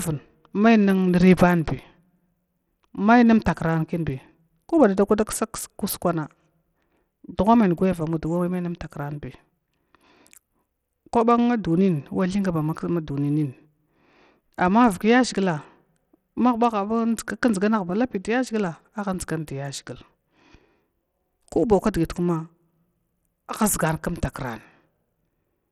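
From start to end, the speech carries plainly audible coding damage, likely from Bluetooth SBC compression. The treble thins and flickers. A gritty haze clings to the voice. The coarse, starved band quantisation fits a low bitrate around 80 kbps.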